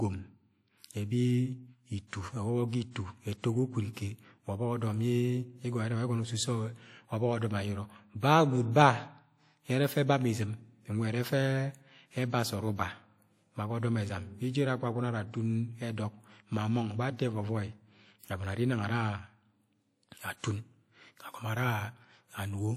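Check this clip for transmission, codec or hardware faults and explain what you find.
One codec fault runs through the whole recording. Throughout, the speech has a ringing, washy smear, with a hiss that swells and fades with each phrase. The likely cause is WMA compression at a low bitrate, about 48 kbps judging by the damage: long transform blocks spread quantisation noise across tens of milliseconds, and weaker spectral detail is discarded.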